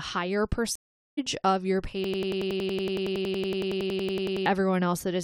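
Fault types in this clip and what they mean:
Stream reconnect: the connection dropped, so playback went silent for about 0.42 s from 0.76 s, then a fresh decoder picked up mid-stream. It resumes roughly 0.4 s further on, at "of your", so a chunk of the speech just isn't there.
System hang loop: the machine froze while the sound hardware kept cycling its buffer, so one 92.9 ms slice repeats 26 times from 2.04 to 4.46 s. That's a machine-gun stutter at 10.8 Hz, fitting a 4096-sample buffer, and about two seconds of speech are lost.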